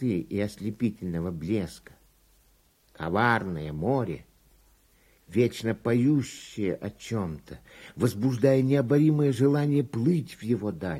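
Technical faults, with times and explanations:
No technical faults detected in this clip.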